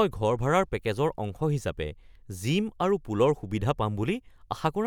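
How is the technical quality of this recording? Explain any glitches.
No glitches turn up anywhere in this speech recording. No working path is listed beyond the speech itself, so there is nothing further to describe.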